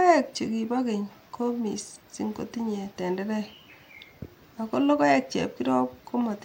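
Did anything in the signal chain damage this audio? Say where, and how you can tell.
No, nothing along the way has left a mark on this speech that I can hear, so there's no stage in the chain to point a finger at.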